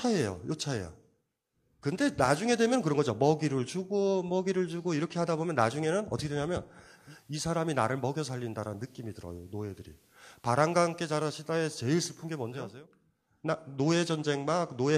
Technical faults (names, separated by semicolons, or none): digital radio blending to analogue